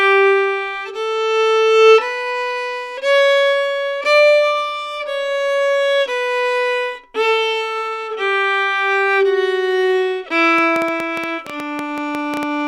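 A recording of everyday sounds, with a train of clicks from 10.59 s to 12.44 s: roughly fifteen near-identical pulses at about 8.1 per second, unevenly spaced and peaking around 10 dB above the surrounding sound. Because every click has the same sharp shape and they arrive in one bounded burst, this is not the random, varied texture of crackle. The likely cause is interference from nearby equipment or a faulty connection or power supply injecting pulses.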